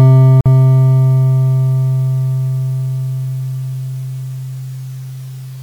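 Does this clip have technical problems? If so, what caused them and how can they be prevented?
Yes. At 0.41 s the music drops out for about 50 ms, resuming at 0.46 s: a gap at a join of encoded pieces. The abrupt silence, its edges smeared by the codec, shows two separately encoded segments butted together with the encoder's start-up delay and final-frame padding left in, after which the music picks up exactly where it stopped. To prevent it, trim encoder delay and padding before concatenating, or encode the whole piece in one pass.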